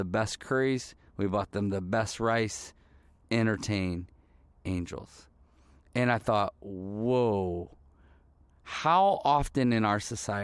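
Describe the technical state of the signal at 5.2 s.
The signal is intact at 5.2 s, with no audible fault at that moment.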